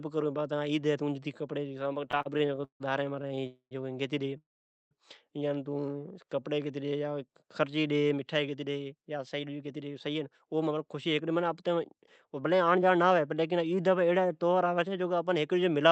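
Repeated stalls (stutter) break up the speech from 2.11 to 2.82 s: the jitter buffer ran dry ten times, and the receiver stretched the last sound to cover 306 ms, the longest hold 156 ms, so nearly half that span is filler. A shorter run follows from 3.22 to 3.45 s, with four brief holds of up to 22 ms. Nothing is lost. What marks this as stutter is the rapid, choppy repetition of many small stalls.

A call audio freeze follows at 3.47 to 3.73 s, and a longer one at 4.38 to 4.93 s. The likely cause is packets held up in transit, emptying the buffer. The last sound is carried on as a fading buzz or hiss, then silence: 100 ms of the first 244 ms gap and 480 ms of the second 532 ms gap. Unlike the stutter, each freeze is one sustained hold that dies away before the speech resumes where it stopped.

A jitter buffer slow-down runs from 6.07 to 6.55 s. The receiver repeated single pitch periods to rebuild its reserve, adding 52 ms, so the speech plays at 90% speed. 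The pitch stays the same, which separates it from a tape-like slowdown. Sounds are drawn out rather than interrupted.

A jitter buffer speed-up covers 8.17 to 13.19 s. The receiver trimmed short pitch-period slices over and over, removing about half a second in total, to cut excess delay. Speech runs at 109% with its pitch unchanged and sounds hurried. It is the reverse of the earlier slow-down.

The Opus call path, coding at 32 kbps with audio band-limited at 8 kHz, adds its usual coding noise.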